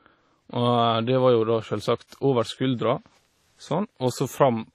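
Throughout the speech, a ringing, washy smear with hiss that swells and fades alongside the signal points to heavy codec damage, likely WMA compression at a low bitrate near 32 kbps. Long transform blocks spread quantisation noise over tens of milliseconds, unlike steady broadband noise, and nothing remains above 16.4 kHz.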